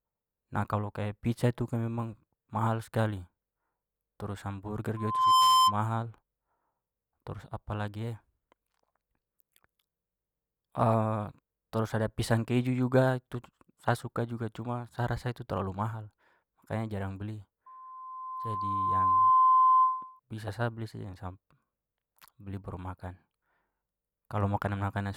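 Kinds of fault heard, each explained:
Loudspeaker feedback squeal: the mic is hearing the PA it feeds, and around 1 kHz the loop has more gain than it loses, so that one frequency keeps feeding itself. You get it twice over the speech. From 4.96 to 5.75 s it swells up in under half a second. From 17.66 to 20.20 s it creeps in more slowly, over a second and a half or so. Both times it ends up roughly 10 dB louder than the speech.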